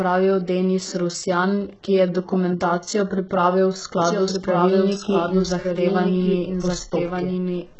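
From the start the speech carries heavy codec damage, likely from HE-AAC compression at a very low bitrate, around 8 kbps. Nothing reaches above 8 kHz, and the treble below that is rebuilt rather than real. Unlike a plain low-pass, s sounds turn gritty and metallic, not merely dull.

At 4.03 s a doubled audio track begins and runs to the end. A full-band copy trails by about a second at roughly 5 dB quieter. It has no decaying tail or room colour and cuts in abruptly, which sets it apart from a natural echo.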